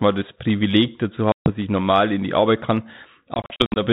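At 1.32 s, packet loss on the ADPCM call cuts about 140 ms to hard-edged silence until 1.5 s. Between 3.34 and 3.81 s, 200 ms more drops out in scattered gaps up to 60 ms. Each time the decoder's predictor loses step, so sound returns slightly distorted before settling.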